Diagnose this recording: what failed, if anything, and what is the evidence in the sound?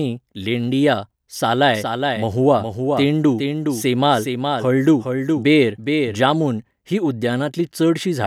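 A doubled audio track runs from 1.74 to 6.16 s, starting just before "जामुन हीं": a dry copy about 5 dB quieter trails roughly 0.4 s behind, with abrupt edges and no decay, unlike reverb. Likely cause: a second, slower capture path.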